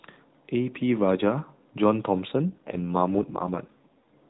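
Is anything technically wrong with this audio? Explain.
Yes. From 2.50 s to 4.14 s there is an AMR rate drop: the link most likely weakened, so the codec switched to a lower-rate mode and spent more of each 20 ms frame on error protection than on describing the sound. The roughness fits a step down from 12.2 kbps to the 4.75 kbps mode. The speech turns buzzy and synthetic until 4.14 s, with no gap and no change in the narrowband AMR-NB band, which still stops at 4 kHz.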